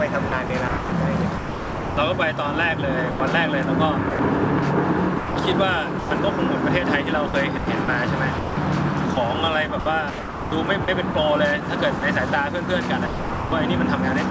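Between 0.29 and 1.97 s the audio is chopped by the voice detector: the likely cause is the sender's detector toggling transmission off and on, so about 0.9 s of sound in total is swapped for comfort noise in two or more holes. At 3.11 to 3.20 s and again at 4.10 to 4.19 s, sound is dropped by the voice detector. Each time, 90 ms gives way to steady comfort noise before the signal resumes. The same chopping recurs from 5.18 to 6.11 s, where about 0.3 s is replaced, and from 7.28 to 11.15 s, where about 0.93 s goes missing across repeated gaps. Two further drops follow: a 30 ms hole at 11.99 s and a longer 450 ms stretch of comfort noise from 13.07 to 13.52 s. Throughout, the call path shows nothing above 8 kHz, consistent with G.722 at 64 kbps.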